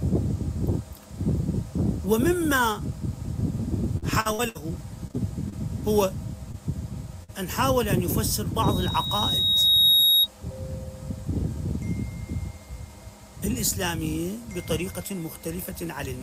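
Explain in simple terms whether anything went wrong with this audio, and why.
Several things went wrong, and they fall into two groups: gaps caused by a patchy network connection, and a howl caused by the playback setup.

From 3.97 to 4.70 s there is repeated packet loss (robotic sound). Four chunks of audio went missing in quick succession, the longest about 62 ms. Each time, the receiving end filled the hole by stretching out the last bit it had, so roughly a third of that stretch is patched-in sound rather than real audio. That is why it turns choppy and mechanical, with pieces dropped.

Shortly after come four cases of short concealed packet loss, at 5.08–5.11 s, 5.11–5.16 s, 5.50–5.54 s and 6.52–6.56 s. Each lost about 20 ms of audio, and the gap was smoothed over by continuing the previous sound and blending back in. You hear a quick smear or wobble rather than a clean cut, and a very short sound falling in the gap can disappear entirely.

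At 7.24–7.30 s there is a burst of packet loss, where about 40 ms went missing in one go. The receiver carried the last sound forward while fading it down, so you hear a brief held buzz or hiss. The audio then picks up again a little further along, with the lost part simply gone.

From 8.63 to 10.27 s there is a loudspeaker feedback squeal. A microphone was picking up its own loudspeaker, creating a loop. At 3.8 kHz that loop kept amplifying itself, so a single high tone swells over roughly a second and a half. It ends up clearly louder than the rest of the audio before it stops.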